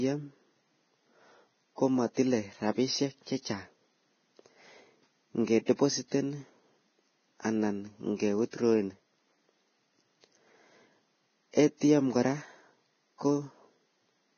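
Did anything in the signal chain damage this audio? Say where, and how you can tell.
Yes. Throughout the speech, everything above 6.5 kHz is missing and the remaining treble is grainy and hissy. This points to a likely Vorbis compression stage at a very low bitrate, around 18 kbps. Unlike a plain low-pass filter, it turns fine detail into noise of similar energy.

At the codec stage, a pre-echo runs from 5.66 to 5.68 s: a short hiss spreads about 25 ms ahead of a sharp attack, softening it. Quantisation noise fills the whole transform block, including the quiet part before the onset. A click or dropout would instead sit at the onset itself.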